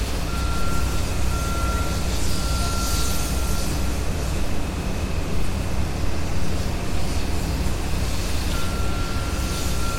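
No technical faults can be heard anywhere in the recording; the signal stays continuous and steady throughout.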